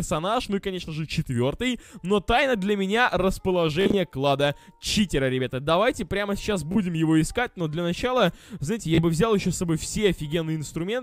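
Bluetooth stutter at 3.81 to 3.98 s, 6.72 to 6.78 s and 8.95 to 9.02 s: lost packets made the receiver replay short buffer slices, giving a brief buzz before the audio skips ahead.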